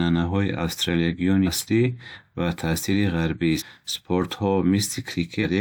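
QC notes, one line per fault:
1.45–1.49 s, 3.58–3.63 s and 5.42–5.44 s: compressed frames skipped. Each is a brief jump where the speech lurches forward, losing about 150 ms at the first and about 300 ms at the others. Whole compressed frames went undecoded, which fits frames of about 43 ms.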